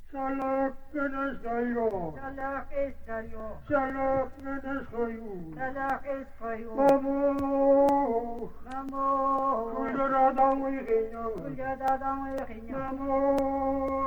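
From 0.42 to 13.88 s, periodic USB or driver dropouts recur every 0.5 s, around thirty in all. Each time roughly a millisecond of audio is skipped outright, giving a small tick heard only over signal. The strict, even spacing separates it from random crackle or network packet loss.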